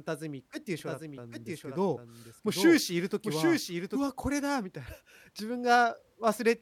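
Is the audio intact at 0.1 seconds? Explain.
Yes, at 0.1 seconds the speech is intact, with no audible fault at that moment.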